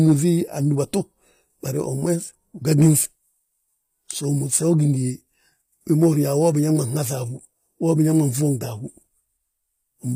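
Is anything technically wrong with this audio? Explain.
Yes. Throughout, plainly audible codec damage points to likely HE-AAC compression, which fits a low bitrate around 24 kbps. The treble stops at 15.5 kHz but is rebuilt from copied lower bands, so harmonics misalign across the crossover and s sounds turn gritty, metallic or lispy. Plain AAC at such a rate would simply lose treble rather than synthesize it.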